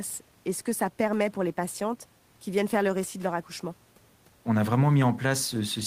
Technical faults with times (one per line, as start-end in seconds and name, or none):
none